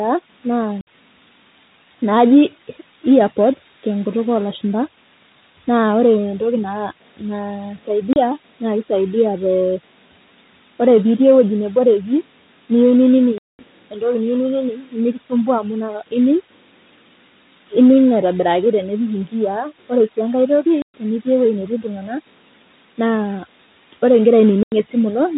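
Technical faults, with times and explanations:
0.81 to 24.72 s, packet loss filled with silence: the speech drops out completely at 0.81 s for 60 ms, at 8.13 s for 30 ms just before "naa kisaidia te", at 13.38 s for 210 ms, at 20.82 s for 120 ms, and at 24.63 s for 90 ms just after "wore ikira". Every gap is a multiple of 30 ms, which fits a 30 ms packet size. Missing packets were replaced with silence instead of concealed, so each hole has abrupt edges. The narrowband G.711 telephone coding underneath is audible only as its 4 kHz ceiling.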